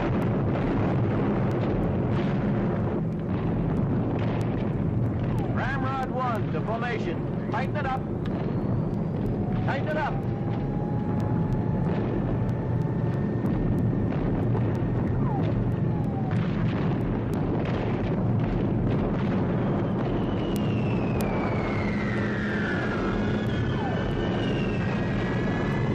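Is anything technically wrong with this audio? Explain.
Yes. From 0.22 s to 25.73 s, sharp ticks of uneven strength recur steadily about every 0.3 s, around seventy in all. These are word clock ticks. A digital link is read on an unlocked clock, off by roughly 70 ppm, so each slip drops or repeats one sample.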